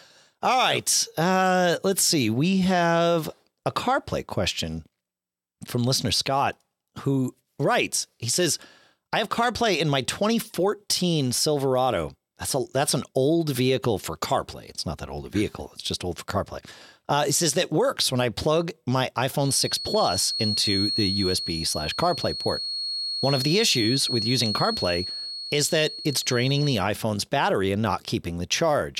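From 19.35 to 26.86 s, after "when I plug my", a 4.3 kHz feedback whistle, likely a speaker-mic loop, wavers without ever swelling into a howl.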